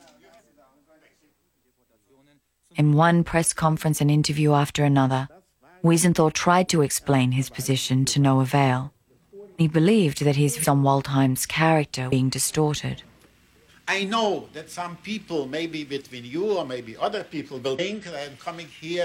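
Compressed frames skipped at 10.59–10.65 s, 12.08–12.13 s and 17.74–17.80 s: the audio jumps ahead by roughly 200, 200 and 100 ms, which fits whole 46.4 ms frames being lost.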